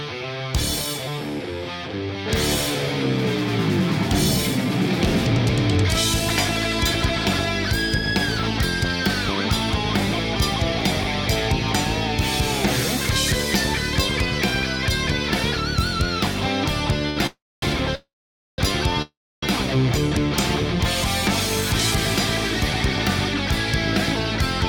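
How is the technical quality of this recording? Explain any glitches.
The recording has a burst of network timing glitches between about 17.1 and 19.4 seconds.

At 17.10 to 17.17 s there is a short stall from a late packet. A packet arrived late and the jitter buffer ran dry. The receiver held the last sound for about 67 ms, then resumed. Nothing is lost. The sound briefly drags with a faint buzz.

Three call audio freezes follow, at 17.26 to 17.63 s, 17.95 to 18.59 s, and 19.02 to 19.43 s. Packets were likely held up in transit. Each time the last sound stretches into a fading buzz, then drops to silence for about 240, 500 and 300 ms. The audio then resumes where it stopped, with nothing missing.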